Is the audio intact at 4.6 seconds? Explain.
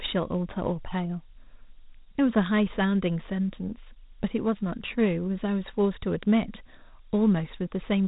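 No. Dialogic VOX ADPCM coding runs throughout: coarse 4-bit step prediction leaves gritty hiss trailing the speech, unlike a clean low-pass, with nothing above 3.8 kHz.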